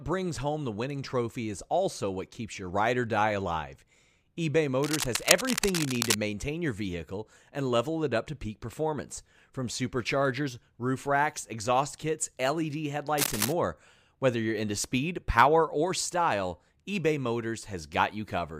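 From 4.83 to 6.15 s, just before "maintain your vehicle and", there's a burst of cable scratch noise, a dense, uneven scratching and rustling roughly as loud as the speech itself. It's likely a worn cable or connector being moved, with its contact resistance jumping around and spraying noise into the signal. It comes back, shorter, from 13.18 to 13.53 s, with the same ragged, crackly texture.

At 7.38 s, between "maintain your vehicle" and "and level it up", you get a tiny skip where a sliver of audio goes missing. That's an overlap between stream segments. Two segments' timestamps overlapped, so the player cut away a bit of audio that wasn't actually duplicated, and the waveform jumps across the gap. The timing fits a stream cut into 6-second segments.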